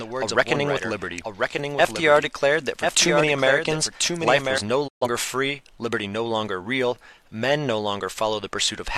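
A doubled audio track runs from the very start of the clip to 4.58 s. A second, full-band copy of the sound trails the original by roughly one second at a level about 5 dB lower. It has no reverberant tail or room colouring, so it sounds like a clean, out-of-step repeat. It likely comes from the same source being picked up again through a slower path, or from an edit leaving two misaligned copies. The copy stops abruptly at 4.58 s.

A digital broadcast dropout follows from 4.87 to 5.07 s. The sound fades to silence over about 20 ms and stays muted for roughly 128 ms, which fits about three lost frames. The receiver lost the signal or rejected corrupted frames and muted its output until valid data returned. Whatever was transmitted during that gap is gone, and the sound resumes partway through rather than picking up where it stopped.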